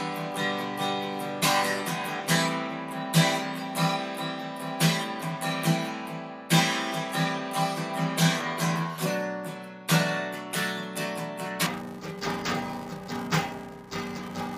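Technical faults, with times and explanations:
11.66 to 14.58 s, interleaved audio read as planar: blocks of alternating left and right samples are split into halves and played side by side, so the sound turns dull and robotic with a 345 Hz buzz and no clear octave drop, which fits 128-sample blocks about 2.9 ms long.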